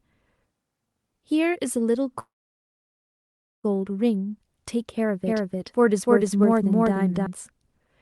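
At 2.19 s a call audio freeze begins. Packets were likely delayed and the buffer ran dry. Sound fades into near-silence, then resumes at 3.66 s with nothing lost.

From 5.26 s to 7.26 s there is a doubled audio track, likely from a second, slower capture path. A dry copy about as loud trails by roughly 0.3 s, starting and stopping abruptly.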